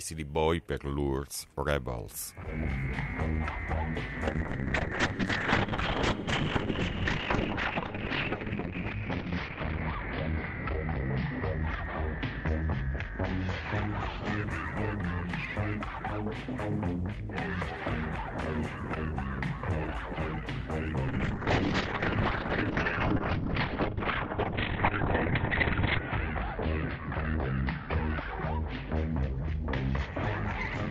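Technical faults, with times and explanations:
4.28–14.50 s and 21.09–30.90 s, call bitrate drop: the audio turns coarse and muffled as the bandwidth falls from 20 kHz to 6 kHz, then to 4 kHz. This fits Opus being squeezed from 64 kbps to about 11 and 8 kbps. The second drop has not recovered by the end.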